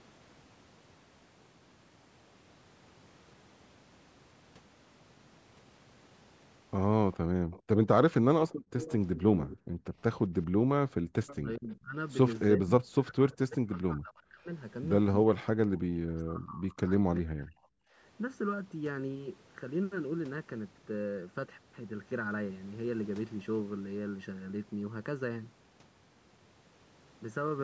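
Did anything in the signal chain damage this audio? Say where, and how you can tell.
Yes. Four faults can be heard, all from call processing or the path feeding it.

Channel delay (comb filtering) runs through the whole clip. The sound is hollow and phasey, with fixed notches, the first near 700 Hz and the next near 2.1 kHz and 3.5 kHz. That spacing points to one channel arriving a little under a millisecond late, probably at a driver or buffer stage, before the two were summed to mono. Codec artefacts shift from moment to moment, but these notches never move.

An echo leak appears from 7.13 to 9.57 s and again from 11.27 to 11.36 s. A distinct copy of the speech follows the original 403 ms later, at about 15 dB and then about 20 dB below it. The likely cause is a far-end loudspeaker whose echo canceller let part of its microphone pickup through. Room reverberation would blur into the speech, but this is a discrete, delayed repeat.

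The background is gated by the echo canceller at 7.24–7.51 s, 8.53–8.72 s and 10.47–11.08 s. The room sound falls by about 38, 39 and 40 dB, then comes back. All three drops fall within or just after the echo-leak stretch, which fits the canceller clamping the microphone while the loudspeaker played. A network dropout would take out the speech as well, but here only the background goes.

Speech is suppressed in double talk at 9.76–9.84 s, and then through much of 11.36–17.8 s, about four seconds in total. At those points the speech dips by up to about 40 dB or cuts out in pieces. The likely cause is the canceller failing to separate the talker from the loudspeaker echo while both sides spoke at once. Packet loss would break up at random, but these cuts follow the overlap. The lack of content above 8 kHz is the normal band limit of call processing, not a fault.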